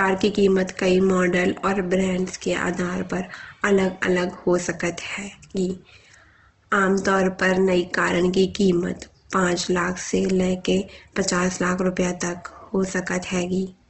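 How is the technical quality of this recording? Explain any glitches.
The quality's noticeably compromised. Throughout, the speech has a grainy, rough texture with nothing above 8.3 kHz, which is likely Opus compression at a low bitrate, something like 16 kbps. Short of bits, the encoder fills bands with folded or noise-like content, so the voice sounds coarse.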